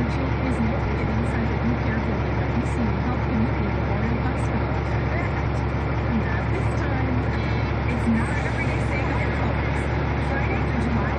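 Frames out of order occur at 0.85–1.05 s, 5.27–5.46 s and 9.03–9.17 s: two adjacent blocks of about 93 ms each (about 70 ms in the last, which fits three frames rather than four) swap places. Each stretch plays as a brief garbled flutter, and no time is lost. A spectrogram shows abrupt vertical discontinuities at three boundaries, and the waveform shows envelope steps where segments splice mismatched.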